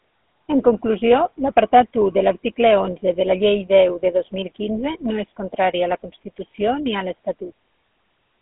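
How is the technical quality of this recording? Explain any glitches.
The recording is noticeably degraded by a phone-codec sound throughout. GSM full-rate codec, throughout: the voice is rebuilt from sparse pulses through a vocal-tract model, leaving a buzzy, gravelly roughness consistent with 13 kbps, band-limited to roughly 200 Hz to 3.4 kHz, nothing above 3.8 kHz.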